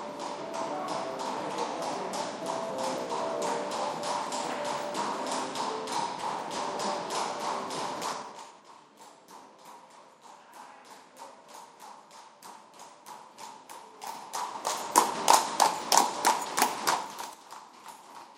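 Zipper noise runs from 7.99 to 8.64 s in this recording of sounds, as the level drops by roughly 20 dB. Rather than gliding, the gain falls in 3 dB steps at around ten a second, and each abrupt jump leaves a small click in the waveform. Strung together, those clicks form a ticking, zipping texture riding on the sound while the level moves.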